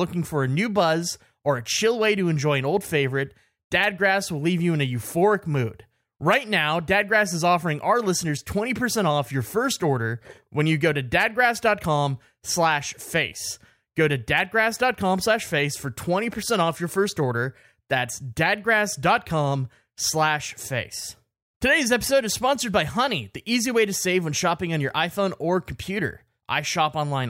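There are no technical faults to describe in this recording.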